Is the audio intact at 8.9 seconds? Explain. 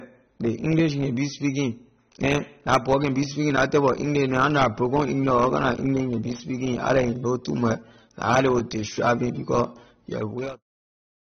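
No. AAC compression runs through the whole clip: a flat ceiling near 6.3 kHz on a spectrogram, a dull, warbling sound likely from a low-bitrate stream of about 24 kbps.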